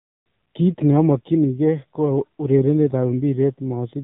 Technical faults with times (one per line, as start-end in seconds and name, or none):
0.00-4.03 AMR narrowband mobile codec